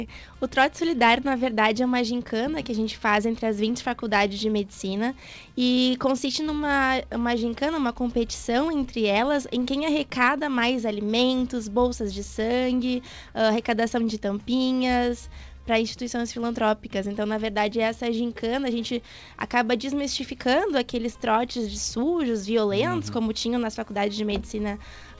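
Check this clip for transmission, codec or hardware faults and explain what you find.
Two related timing faults run through the audio, carried over a G.722 call path that passes nothing above 8 kHz.

Clock drift between sender and receiver persists for the whole clip. The sender's clock runs roughly 2 percent slow, so the receiver's jitter buffer keeps draining. It differs from jitter-induced dropouts because the hiccups never stop and always push the same way.

Repeated timing corrections run from 0.27 s to 25.04 s. To avoid starving, the receiver keeps repeating tiny slices, so playback runs at 98 percent speed and gains about half a second overall. Unlike packet-loss concealment, nothing goes missing.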